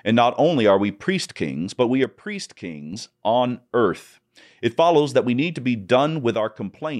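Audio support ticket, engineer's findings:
Level drops by about 6 dB at 2.04–2.93 s and again from 6.35 s to the end. Likely one channel drops out, so the mono sum loses half its shared signal.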